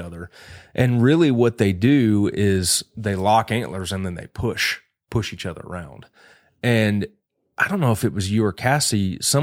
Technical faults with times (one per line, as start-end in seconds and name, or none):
none